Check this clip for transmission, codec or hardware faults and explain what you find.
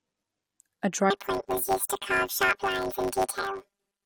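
One fault is present. From 1.10 s to the end, the speech turns into a robotic buzz at 100 Hz with no clear octave shift: planar audio read as interleaved, so each 10 ms block plays its left half then its right half at double speed.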